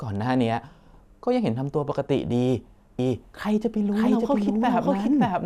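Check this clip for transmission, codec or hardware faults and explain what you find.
Two faults are audible: a doubled audio track from 2.99 s to the end, and a short burst of DAB burbling at 3.41 to 3.48 s.

Doubled audio track: From 2.99 s a second full-band copy of the speech enters abruptly, trailing the original by about half a second at roughly the same level. The likely cause is the audio being captured a second time through a slower path. It sounds like a dry, colourless echo with no room decay. On a waveform, each syllable's envelope repeats about 0.5 s later at similar height. A spectrogram shows the harmonic patterns duplicated and shifted right, with a sharp onset.

DAB burbling: Between 3.41 and 3.48 s, weak reception lets a small fraction of a percent of bit errors slip past error correction into the MP2 data. Corrupted samples put short blips of noise in single sub-bands, and corrupted scale factors make sub-bands jump in level for up to a frame, so the speech briefly burbles. 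A spectrogram shows isolated rectangular blocks of energy in narrow frequency bands, each up to one frame wide. The waveform shows small irregular spikes over that short stretch.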